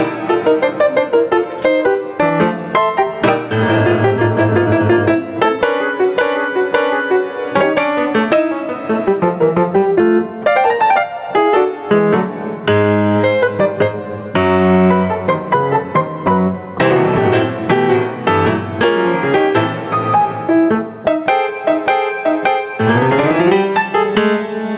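Gain pumping runs throughout: the gain swings roughly 20 dB, ducking under loud sounds, likely a limiter fighting excessive gain. Unlike gating, it never falls silent.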